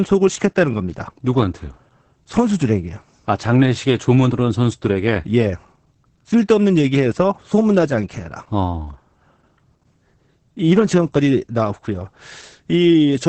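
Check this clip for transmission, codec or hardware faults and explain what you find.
One fault runs through the whole recording: heavy codec damage from low-rate compression.

Opus voice compression, present from start to finish. The speech passes through Opus's SILK linear-prediction coder in wideband mode, working in 20 ms frames. At a rate that fits roughly 10 kbps, the encoder keeps the band narrow and quantises the excitation coarsely. Nothing survives above 8.7 kHz, which takes the air off consonants. The coarse excitation leaves the speech muffled, hoarse and faintly robotic throughout.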